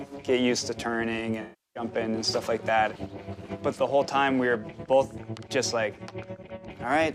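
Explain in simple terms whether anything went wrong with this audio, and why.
From 1.41 to 1.83 s, AAC frame loss with concealment occurs. About a third of a second went missing, and the player patched the gap by guessing.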